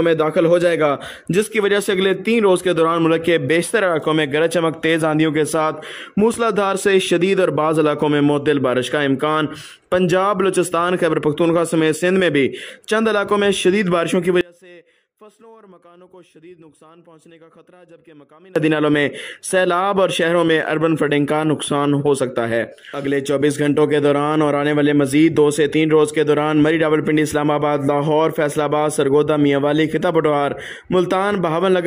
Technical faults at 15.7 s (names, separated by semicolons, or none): audio dropout to a faint residue